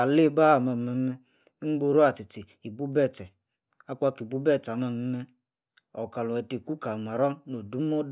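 No technical faults can be heard anywhere in the recording, which holds steady as a continuous signal throughout.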